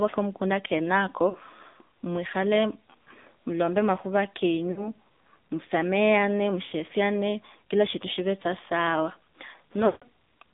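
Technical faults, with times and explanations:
Throughout: AMR narrowband mobile codec at 7.4 kbps, band limited to 200 Hz–3.7 kHz, giving a buzzy, synthetic tone from its sparse-pulse vocal tract model.
1.30–1.36 s (after "kamumunda kenako"), 4.72–4.88 s (after "mwilombe makhura"), 6.66–6.73 s: lost AMR speech frames, 40 to 60 ms each. The decoder reuses the last pitch and vocal tract settings at falling gain, causing brief dips and warble.
9.86–10.03 s: lost AMR speech frames, a 160 ms run. The repeated settings draw the sound out as it fades toward silence.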